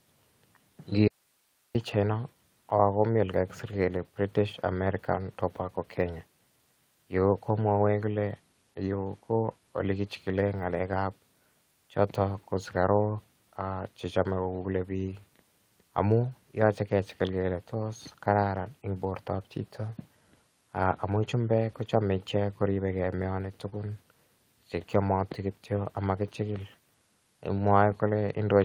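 At 1.08 s the speech cuts off abruptly and returns at 1.75 s, leaving a gap of about 0.67 s that holds only hiss, about 40 dB below the speech level. This is an audio dropout to a faint residue. The cause is likely a break in the wanted signal while the path after it stayed live, so the background noise carried on. It differs from a natural pause or fade because both edges are sudden and the noise floor stays exposed instead of dropping to silence.

From 12.67 s to 12.69 s there is a 20 ms stretch that sounds rougher and noisier, with no gap at all. This is a lost packet rebuilt from error correction. The timing fits one lost packet whose low-bitrate copy arrived in the following packet, and the decoder played that copy in its place. Because real but degraded audio fills the slot, it never smears or ticks. It just sounds briefly coarse.

At 23.69 s a short concealed packet loss gives a brief smear lasting to 23.74 s. 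About 20 ms of audio never arrived, and the receiver covered it with 22 ms of synthesised continuation, extending the preceding sound and then blending back into the real signal. This one is guesswork rather than a degraded copy of what was lost, so it reads as a wobble or slur.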